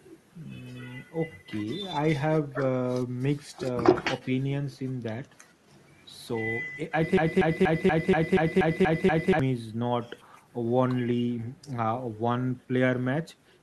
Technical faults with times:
0.00-13.62 echo with no canceller
7.17-9.39 broken-record loop

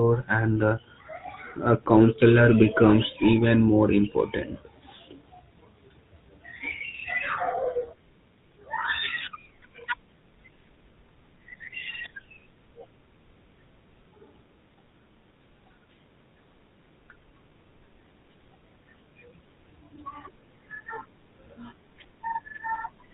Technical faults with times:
0.00-23.14 GSM full-rate codec

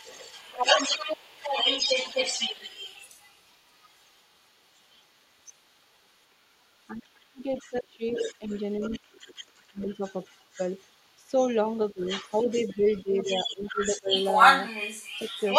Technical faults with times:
0.00-11.32 other side's voice leaking through
6.91-10.02 speech suppressed in double talk
11.68-15.59 other side's voice leaking through
11.93-12.09 speech suppressed in double talk
13.03-14.12 speech suppressed in double talk

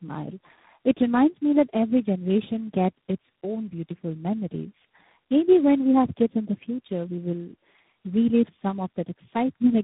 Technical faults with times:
0.00-9.83 tandem speech coding

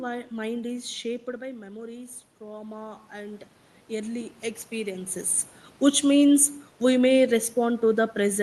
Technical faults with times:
2.38-5.42 automatic gain rising

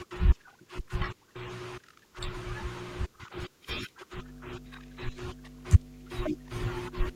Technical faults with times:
4.16-7.16 mains hum

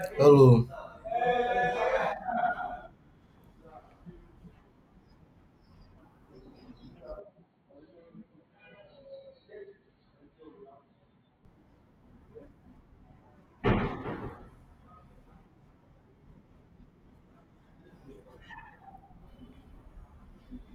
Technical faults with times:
7.19-11.45 input switched to a poorer device

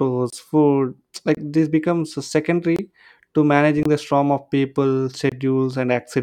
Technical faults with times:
0.30-0.33 block of digital silence
1.35-1.37 block of digital silence
2.76-2.79 block of digital silence
3.83-3.85 block of digital silence
5.29-5.32 block of digital silence

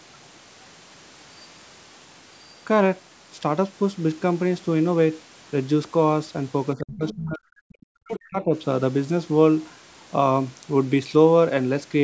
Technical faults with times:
0.25-0.29 other side's voice leaking through
6.75-7.47 speech suppressed in double talk
7.08-7.15 other side's voice leaking through
7.69-7.82 other side's voice leaking through
7.83-8.55 speech suppressed in double talk

